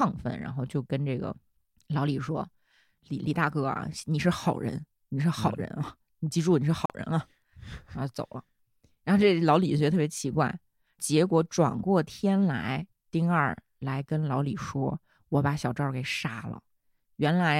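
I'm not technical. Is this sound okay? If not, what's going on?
No. At 6.86 to 6.90 s the speech drops to silence for about 42 ms, then resumes. This is a Bluetooth stall, likely from wireless interference.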